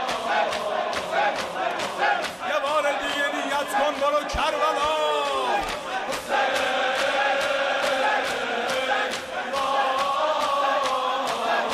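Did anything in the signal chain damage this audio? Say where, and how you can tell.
No, nothing along the way seems to have damaged this audio, and there's nothing here to point at.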